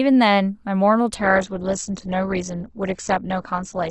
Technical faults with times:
1.15-3.90 adaptive stream at a lower bitrate

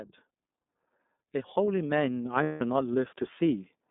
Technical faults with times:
0.00-3.91 iLBC codec
1.19-3.74 automatic gain rising
2.43-2.61 lost iLBC frames

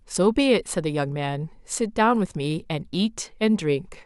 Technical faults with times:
none

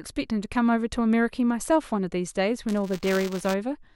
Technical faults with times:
2.68-3.54 buffer tearing

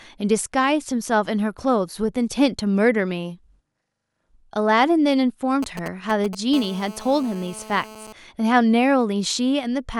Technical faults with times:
5.63-6.35 GSM signalling bursts
6.53-8.13 GSM phone buzz

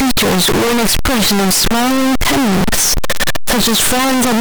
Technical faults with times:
0.00-4.40 signed and unsigned mixed up

